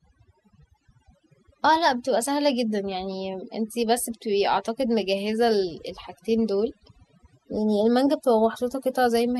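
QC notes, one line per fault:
Throughout: overdone noise removal. A noise reduction stage was pushed too hard on a noisy speech recording. Each frequency band that sits close to the estimated noise level is pulled far down or shut off. The quieter parts of the speech fall below that line and are removed with the noise. The gaps between phrases drop to near silence, broken by twinkling specks.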